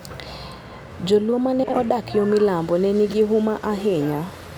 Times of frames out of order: 1.64-1.78, 3.09-3.14

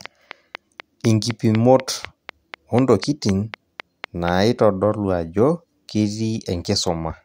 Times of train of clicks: 0.06-4.29

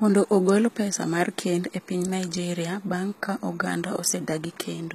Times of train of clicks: none

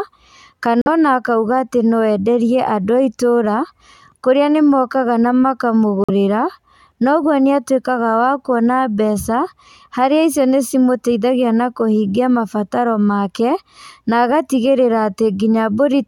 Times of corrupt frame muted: 0.81-0.88, 6.04-6.10

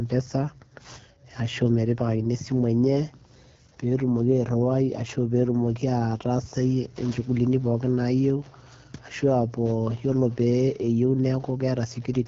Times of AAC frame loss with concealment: none

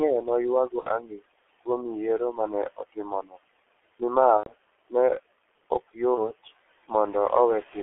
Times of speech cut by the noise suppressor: 1.01-1.24

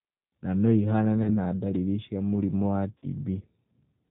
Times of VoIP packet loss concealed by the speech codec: 1.23-1.38, 2.98-3.06

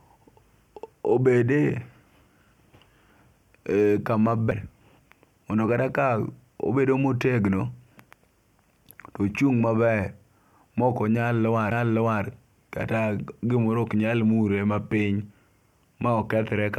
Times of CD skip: 4.51, 11.71

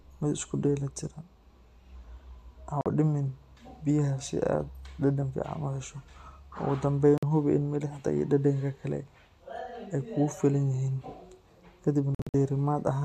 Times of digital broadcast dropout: 2.81-2.86, 7.18-7.23, 12.15-12.34

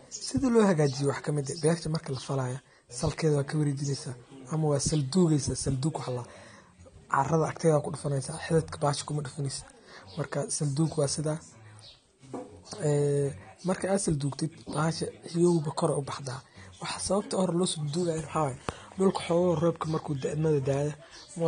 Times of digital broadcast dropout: none

